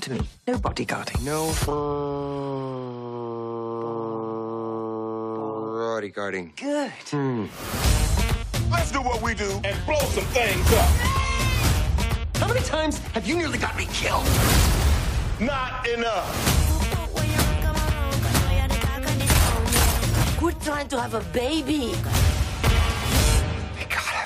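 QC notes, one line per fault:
No faults found: the audio signal holds steady and continuous, with no breaks, level jumps or added disturbances at any point.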